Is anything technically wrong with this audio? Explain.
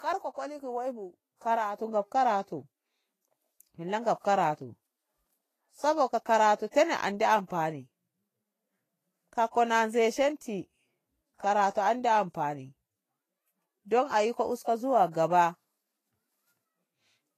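Yes. Two related faults can be heard in this speech.

Throughout, the speech has the hissy, grainy texture of heavy lossy coding, most likely Vorbis compression. Nothing is present above about 14.2 kHz, and the upper treble has been quantised so coarsely that its fine detail turns into noise of similar energy, roughening sibilants and blurring consonant onsets. The plainly audible damage points to a low bitrate, around 31 kbps. Unlike broadband background hiss, this graininess follows the signal and disappears when the speech stops.

Pre-echo occurs at 9.51 to 9.55 s, a 37 ms smear, and at 15.11 to 15.14 s, about 32 ms. At each point a sharp onset fell late in a transform block. The codec spread quantisation noise sized for the loud attack across the whole block, so a brief hiss leads into the attack and softens it. This is not a click or dropout, because the disturbance precedes the onset and fades into it rather than interrupting it.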